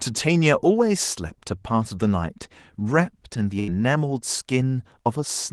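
At 3.59 s a burst of packet loss hits the speech: several consecutive packets fail to arrive in time, and the receiver conceals the hole for about 82 ms, running on to 3.71 s. It extends the last sound it had and fades it down, heard as a brief held buzz or dimming hiss. When audio resumes, roughly 80 ms of speech is simply gone, so the line jumps forward. The call codec's band limit near 12 kHz applies throughout.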